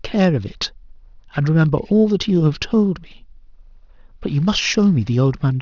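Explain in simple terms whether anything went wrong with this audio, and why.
Yes, something went wrong. The speech has aliasing from start to finish. Its sampling rate was cut, which fits a drop from 24 kHz to 12 kHz, without first removing the high sounds the new rate can't hold. Anything above 6 kHz folded back down into lower, wrong pitches. You hear this as a gritty, metallic edge on hissy sounds like s and sh. The false tones are quieter than the speech.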